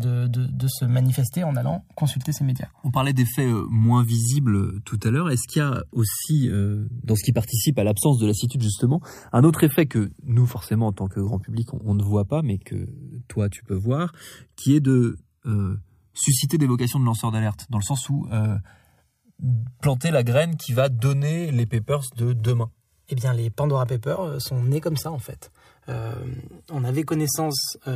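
A speech clip with channels drifting apart throughout: the two sides run on clocks roughly 150 ppm apart, so their offset creeps to around 3 ms by the end. Summed to mono this gives slow flanging, seen on a spectrogram as comb notches gliding steadily across the frequencies.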